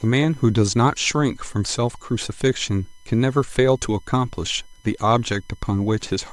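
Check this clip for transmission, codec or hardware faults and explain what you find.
There's one hardware fault, running the whole way through: USB whine, a faint fixed 1 kHz tone under the speech, loudest at its 3 kHz harmonic, from the bus's 1 ms current frames leaking into power or ground.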